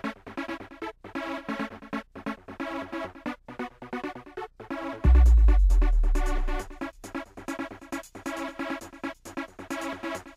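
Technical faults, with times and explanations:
Nothing technical stands out here; it's a smooth listen all the way through with nothing to flag.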